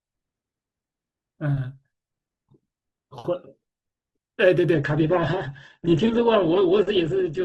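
An adaptive stream dropped to a lower bitrate partway through this speech clip, stepping down from what sounds like Opus at around 64 kbit/s to roughly 12 kbit/s at 4.74 s and staying there until the end at 7.44 s. With no gap at the switch, the treble is suddenly cut off above 8.2 kHz, and codec artefacts become more prominent.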